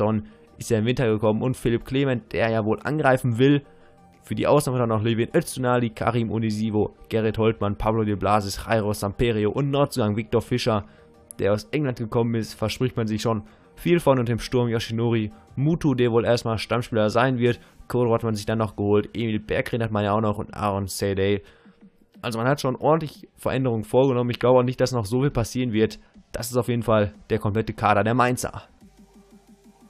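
No faults are audible anywhere in the recording.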